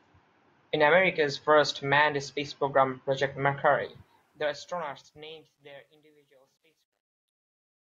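A fade-out on this speech recording was processed with too few bits and no dither, which fits an 11-bit gain stage, so truncation distortion on a fade appears from 3.83 s to 7.95 s. The fade itself eases down from about 4 s, but as the level sinks the waveform collapses into coarse steps, turning gritty, worst from 5.48 s to 7.96 s.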